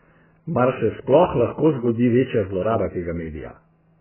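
Throughout, the speech sounds dull and muffled, with nothing above 3.1 kHz and a smeared, warbling texture on sustained sounds and sibilants. The cause is likely heavy AAC compression, where damage this severe points to a very low bitrate, around 8 kbps.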